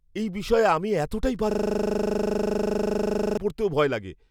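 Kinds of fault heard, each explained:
System hang loop: the driver stalled while the hardware kept replaying one 40 ms buffer, repeated 47 times from 1.51 to 3.37 s, giving a 25 Hz buzz. The waveform shows an identical repeating block; the spectrogram shows evenly spaced vertical striping with frozen spectral content.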